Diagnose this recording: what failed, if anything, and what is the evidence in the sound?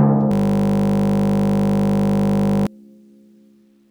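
A system hang loop at the driver or buffer stage turns the music into a steady 50 Hz buzz from 0.32 to 2.67 s. The same 20 ms slice repeats over a hundred times, so the waveform shows identical cycles and the spectrogram shows a frozen comb of 50 Hz harmonics.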